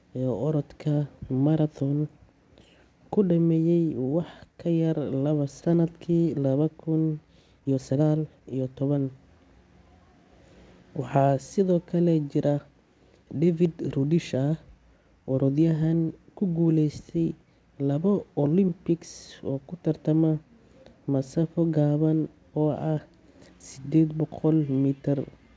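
At 5.62 to 5.72 s there is a skip ahead. Roughly a second of speech is missing, dropped in transit or discarded when an overfull jitter buffer jumped to audio already waiting. The two sides join almost directly, so the speech lurches forward mid-flow. On a waveform the envelope changes abruptly at the join, and on a spectrogram the harmonic traces and formants break off and resume in different positions, with no silent gap between them.

A jitter buffer speed-up follows in two stretches, as the buffer sheds the excess delay by removing short pitch-period pieces over and over. From 6.19 to 6.63 s the speech runs at about 112% speed with roughly 70 ms taken out. From 7.24 to 9.07 s it runs at about 122% with around 400 ms removed, and sounds noticeably hurried while the pitch stays the same. On a spectrogram the harmonic spacing is unchanged, but syllables and formant transitions are compressed in time. 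A waveform shows shortened voiced segments with unchanged period spacing.

Throughout, the call-path band limit is visible as an empty spectrogram above 8 kHz, which fits G.722.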